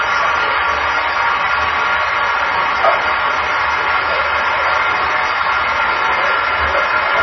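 Throughout the clip, the likely cause is MP3 compression at a very low bitrate, something on the order of 24 kbps, where the encoder runs short of bits. It cuts the treble off, leaving nothing above 5.9 kHz, so the sound is dull and boxed-in. It also drops weaker frequency lines that flicker in and out between frames, giving a heavy watery, swirling texture with metallic chirps on bright content and smeared attacks.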